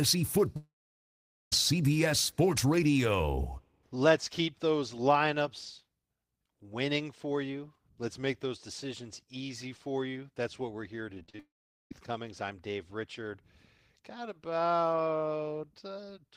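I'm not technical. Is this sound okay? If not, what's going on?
No. There are two kinds of problem, both from the audio travelling over a network.

Long network dropout: at 0.56 to 1.53 s, and again at 11.39 to 11.92 s, the connection most likely stopped delivering audio altogether. The receiving end briefly stretched the last bit of sound into a short fading buzz, then gave up, so you hear near-silence. About a second of speech is missing the first time, about half a second the second time, and the talking resumes without it.

Repeated packet loss (robotic sound): from 11.15 to 11.39 s, small chunks of audio kept getting lost or arriving late, six times in about a quarter of a second. Each hole, the longest about 35 ms, was patched by repeating the sound just before it. Nearly half of that stretch is patched rather than real, so the speech turns choppy and machine-like just before the second dropout cuts in.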